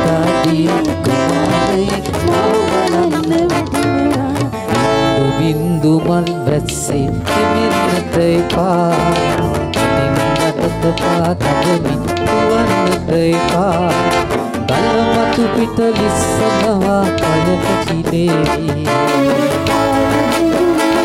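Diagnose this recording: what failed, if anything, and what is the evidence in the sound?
The converter stage failed, with sample clock jitter from 19.05 s to the end at 21.04 s. A rough, hiss-like grain rides on the sound, sitting around 30 dB below it. The converter's clock wanders by several microseconds, so each sample is taken slightly early or late, and the error grows with the waveform's slope. Unlike steady background noise or a fixed noise floor, this roughness follows the signal itself, growing with loud and high-frequency content.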